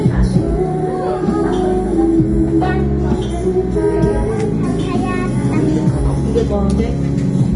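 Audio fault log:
Throughout: Vorbis compression, plainly audible, nothing above 10.6 kHz; treble turns grainy and hissy, attacks blur, likely from coding at roughly 31 kbps.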